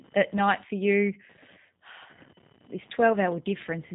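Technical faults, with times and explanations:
Throughout, computer activity noise: a faint buzzing chirp with a pulse rate of roughly 1 kHz sits around 30 dB below the speech. It comes from processor or peripheral load shifting the ground shared with the audio circuit, so it follows the machine's activity rather than the talker's pauses. A spectrogram shows a thin horizontal line near 1 kHz with harmonics that continue through silences. Zoomed in, the waveform shows a regular low-level pulse train under the speech.
Throughout, G.729 codec: the speech sounds plainly rough and synthetic, and its background warbles. This fits the G.729A variant at 8 kbit/s. The codec rebuilds each 10 ms frame from a vocal tract filter, a pitch predictor and a few pulses, so fine detail is replaced by an approximation. On a spectrogram, energy stops sharply at 3.8 kHz, leaving empty space above it. Harmonics look smeared and blocky in frame-sized steps.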